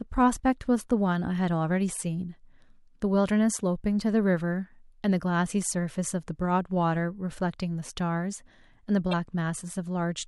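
Right near the end of the speech, at about 9.11 to 9.14 s, there's a short burst of damaged data in the compressed stream. For roughly 20 ms the decoder hits frames that don't make sense, so it mangles what it gets and loses its place until it finds the next valid frame header. You hear it as a quick glitch cutting across the speech, over almost as soon as it starts.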